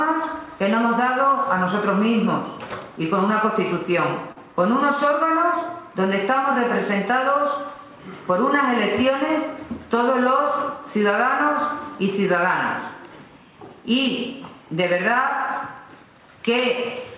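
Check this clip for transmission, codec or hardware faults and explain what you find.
There's one transmission fault, at 4.32 to 4.39 s: a short concealed packet loss. About 40 ms of audio didn't reach the decoder in time, so the receiver extended the preceding sound to fill the gap and blended back in. You hear it as a brief smear or wobble. The call path tops out at 4 kHz, which fits narrowband G.711.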